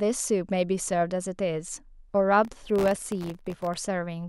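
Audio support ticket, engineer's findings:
Processor overload crackle, 2.45 to 3.76 s: gritty tearing over the speech. CPU missing many sub-millisecond buffer deadlines, around a hundred, each dropping to silence with hard edges.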